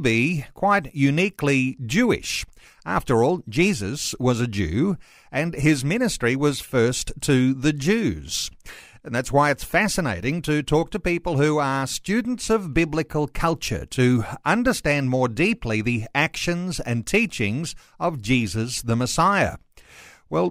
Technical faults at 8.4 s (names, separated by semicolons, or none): none